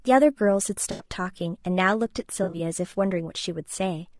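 Low-delay AAC compression runs through the whole of this speech clip and is plainly audible: the voice sounds rough and grainy, with noise filling the gaps between pitch harmonics and a thin, synthetic-sounding top band. The likely cause is AAC-ELD at a low bitrate, around 32 kbps. Its very short frames cannot separate closely spaced harmonics well and spend bits quickly, so detail between harmonics and at high frequencies is lost.

AAC frame loss with concealment occurs from 0.91 to 1.06 s and again from 2.43 to 2.60 s. The first gap is about 80 ms. The second adds up to about 100 ms of missing audio spread across 160 ms, in short runs of a few tens of milliseconds. In both places the decoder fills each hole from the last good spectrum instead of leaving silence.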